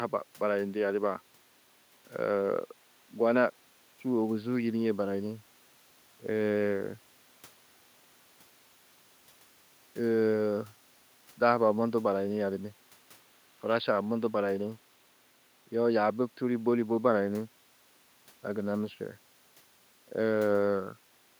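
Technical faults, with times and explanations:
Nothing stood out on listening to this speech recording, with only a faint room background sitting about 40 dB below the talker.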